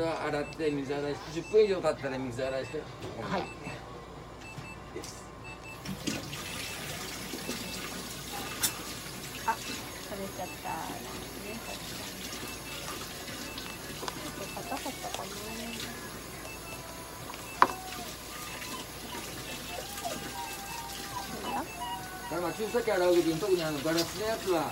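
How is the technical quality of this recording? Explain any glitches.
The recording has one clear glitch, a train of clicks running from 20.45 s to 24.71 s. About seventy sharp pulses arrive at a steady 14.8 per second, each peaking at roughly the level of the sound itself, so they tick audibly over it and through any gaps. The likely cause is interference or a faltering interface injecting repeated pulses. A waveform shows evenly spaced spikes; a spectrogram shows thin, regularly spaced vertical lines across all frequencies.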